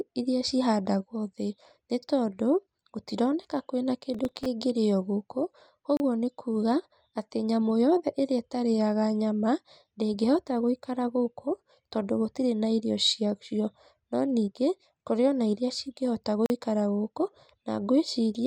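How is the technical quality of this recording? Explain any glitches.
The recording has three glitches. A processor overload crackle runs from 4.14 to 4.46 s: many short buffers, roughly 3 ms each, miss their deadlines, and each miss leaves a tiny hard-edged hole. Together these holes make a gritty tearing over the speech, not one clean dropout. A block of digital silence occurs at 5.97 s (30 ms) and at 16.46 s (40 ms). Each time, the sound cuts straight to silence and back with no fade, giving a single short hole rather than a crackling burst.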